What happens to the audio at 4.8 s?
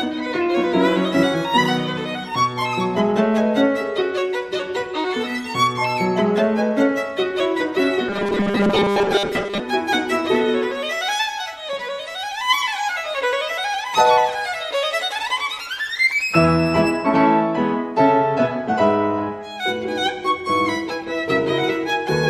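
Nothing goes wrong at 4.8 s; the audio plays through that moment intact, with no dropout, click or other fault.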